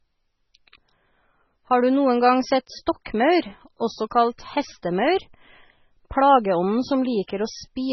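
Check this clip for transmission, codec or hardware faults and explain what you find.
One codec fault runs through the whole clip, and it is likely MP3 compression at a very low bitrate, consistent with roughly 16 kbps. Starved of bits, the encoder discards the treble entirely above about 5.9 kHz and drops weak frequency lines that flicker between frames. The speech sounds dull, watery and swirling, with chirpy, smeared consonants and heavy damage throughout.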